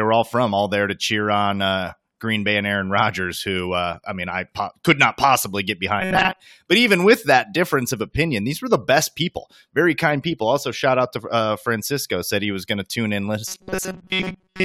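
From 6.00 to 6.41 s, after "could not possibly get", and from 13.48 s to the end, after "going to tune in", speech collapses into robotic sound from repeated short buffers. It becomes a rigid 188 Hz buzz, likely from a 5.3 ms buffer looped over most of the audio. A spectrogram shows evenly spaced harmonic stripes, and the waveform shows identical repeating cycles.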